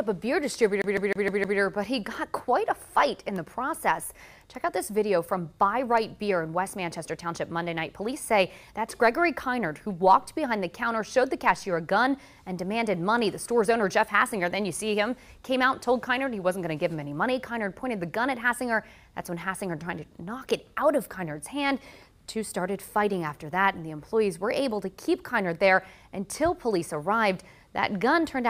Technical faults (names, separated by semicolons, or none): CD stuck on one turn